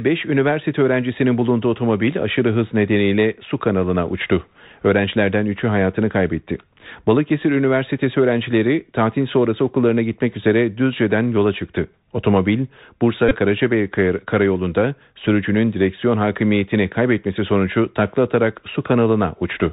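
A speech recording carried over a Bluetooth CVSD headset codec for its whole length, with plainly audible damage. The band stops at 4 kHz, so a spectrogram shows a hard ceiling with nothing above it, and a granular hiss lies under the speech. Sibilants come out scratchy, and loud bright passages smear because the one-bit delta coder's adaptive step can't keep up with fast swings. All of this fits a 64 kbps CVSD link. From 13.29 to 13.36 s there is a Bluetooth headset packet repeat. When headset packets went missing, the chip decoded the previous packet's bits again and again, about 22.5 ms in all, which points to roughly six lost packets. Repeating every 3.75 ms, the copies produce a short, steady buzz near 267 Hz before clean audio resumes. On the waveform this looks like a stretch of identical short cycles, and on the spectrogram it appears as brief horizontal harmonic lines at multiples of 267 Hz.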